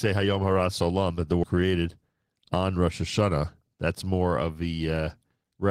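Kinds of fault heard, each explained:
Skip ahead: at about 1.44 s, just after "that the", the speech jumps forward, losing roughly a third of a second, with no silence or filler at the join. The audio before and after is butted together almost directly, so the playback delay shrinks by about the same amount, which points to the buffer discarding queued audio to catch up. Unlike a dropout, nothing pauses; the sound simply lurches onward with material missing.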